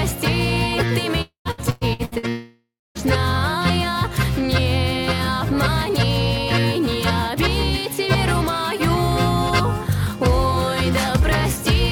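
At 1.21 s the stream most likely suffered a long network dropout, with no audio reaching the receiver until 1.48 s. About 240 ms of sound is lost. The receiver stretches the last fragment into a fading buzz, and for roughly the final 110 ms only near-silence remains before the audio resumes with that piece missing.

From 1.51 to 2.26 s, repeated packet loss produces a robotic sound. Audio keeps arriving late or not at all, opening five holes with the longest at 113 ms. Each hole is patched by extending the preceding sound, so about half of this span is synthetic filler. The result is a choppy texture, with about 360 ms of the real audio gone.

At 2.29 s a second long network dropout, again the likely cause, cuts the audio until 2.98 s. About 660 ms never arrives. The concealment hiss dies away, and roughly the last 240 ms is bare silence before playback picks up later, skipping the lost stretch.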